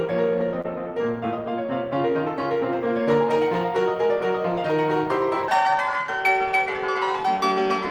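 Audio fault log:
0.61–0.66 s, short concealed packet loss: about 20 ms of the music went missing and was bridged by extending the preceding sound, leaving a brief smear rather than a silent gap or a click.
5.48 s to end, section at the wrong speed: the music suddenly runs 1.64 times faster and about ten semitones higher, likely from playback on the wrong clock. Tempo and pitch jump together, which rules out a plain pitch shift.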